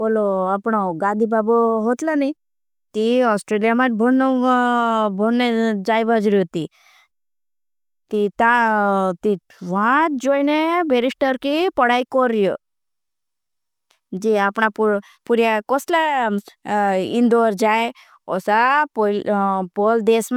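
Nothing technical stands out in this speech recording; it's just someone talking, with no faults to point to anywhere along the way.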